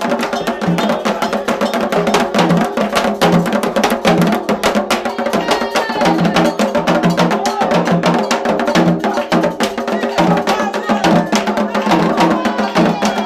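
No technical faults can be heard anywhere in the clip.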